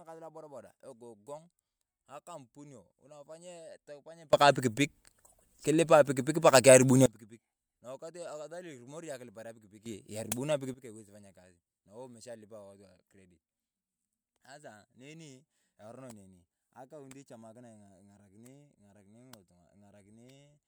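At 4.33 s the speech and its background noise leap up about 24 dB together until 7.06 s, then again about 12 dB from 9.86 to 10.74 s, just before "aiwesi kupanya". These are sudden gain jumps, likely gain applied without any ramp.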